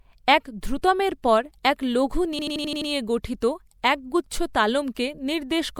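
A speech clip with a machine-gun stutter from 2.39 to 2.90 s, right after "পর এক লঘু" and before "গঠিত একগুচ্ছ": an 85 ms fragment repeats six times at about 11.7 Hz. This is a system hang loop. The system stalled while the audio hardware kept replaying one ring buffer, which fits a 4096-sample buffer.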